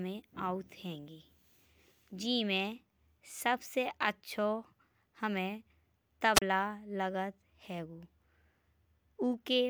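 At 6.34 s the speech runs into a wireless microphone squelch dropout lasting until about 6.42 s. The radio link from the analogue FM transmitter fades, and as the carrier weakens the receiver's squelch shuts the output off. You hear a short swell of hiss and static, then a hole of near silence of about 31 ms where the audio is muted outright, before the signal recovers and the speech comes back.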